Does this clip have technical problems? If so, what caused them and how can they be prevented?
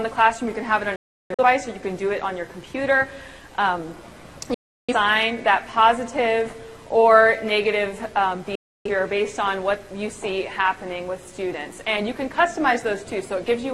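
Yes: digital broadcast dropouts at 0.96–1.43 s, 4.54–4.94 s and 8.55–8.90 s. The first breaks into short holes, with a 341 ms longest silence. Each time the receiver mutes with a 3 ms fade when frames fail, unlike a plain edit cut or concealed streaming loss, and material is skipped. A stronger signal or better antenna prevents this.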